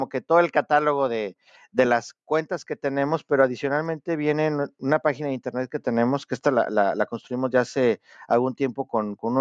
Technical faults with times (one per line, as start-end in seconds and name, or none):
none